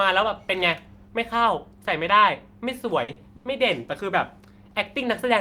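At 3.03 s there's a burst of packet loss running to about 3.11 s. A short run of packets didn't make it in time, so the receiver kept the last bit of speech going for around 50 ms and faded it down while it waited. When the real audio picks up again, about 40 ms of the talker has simply gone, so you hear a brief held tail and then a small jump forward.

Right behind it, from 3.12 to 3.19 s, comes a short concealed packet loss. Another few hundredths of a second never reached the decoder, and the receiver patched the hole by extending the preceding sound for about 40 ms before blending back into the real stream. It comes across as a quick smear or wobble. Since about 40 ms is missing here as well, anything brief that fell in that slot is lost.

Then at 3.36 s there's a short stall from a late packet, lasting until about 3.48 s. This time nothing was lost. A packet simply turned up roughly 90 ms late, so the jitter buffer ran dry and the receiver stretched the current sound for about 90 ms until it arrived. 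Playback then carries on from exactly where it left off, so that moment is held too long, with a slight buzzy, drawn-out quality.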